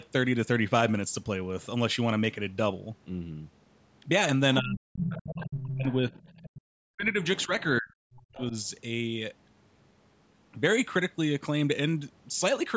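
Speech suppressed in double talk runs from 4.6 to 8.53 s in this speech recording: the talker's voice repeatedly sinks, in places by something like 40 dB, and drops out in pieces for roughly three seconds in total within that window. That pattern likely comes from an echo canceller that heard both ends talking at once, could not tell the local talker apart from loudspeaker echo, and pulled the whole microphone signal down. The other side's voice leaking through appears from 5.02 to 6.61 s, sitting only around 10 dB under the talker, and again more faintly from 7.24 to 7.63 s, roughly 20 dB down. The far-end audio is likely played on the device's loudspeaker and reaches the microphone, and the canceller has left part of it in the signal. The audio also stops at 8 kHz, which fits call-band microphone processing.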